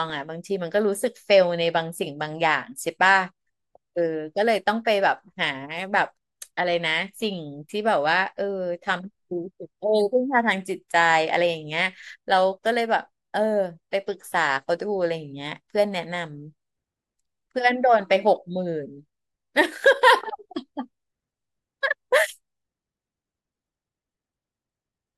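From 0 to 12.09 s the speech sounds dulled up top: channel delay (comb filtering), one channel about a sample late, cancelling around 20 kHz.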